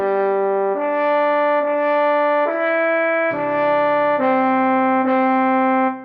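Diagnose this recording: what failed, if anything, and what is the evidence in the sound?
Nothing in the recording has failed: the signal arrives intact over a working WebRTC call path, and its top end rolling off at around 12 kHz is the normal behaviour of an Opus call codec at a moderate bitrate, not a fault.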